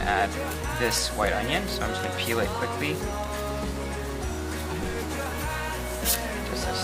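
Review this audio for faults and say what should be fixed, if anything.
Loose connector crackle appears twice: from 0.61 to 0.64 s, and again from 3.24 to 3.39 s. The second burst is longer, about 0.16 s. Both are irregular scratchy bursts. A worn or dirty contact in the signal path is making and breaking as it shifts. Each break chops the audio. Any DC sitting on the line turns those breaks into pops. To prevent it, clean or replace the suspect connector and secure the cable so it cannot move.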